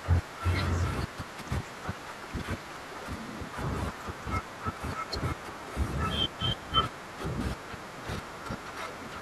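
At 7.13 s and again at 8.26 s the speech jumps forward, losing a few milliseconds and then around 10 ms, with no gap of silence. That seamless skip, unlike a dropout's brief hush, points to a likely dropped buffer (overrun).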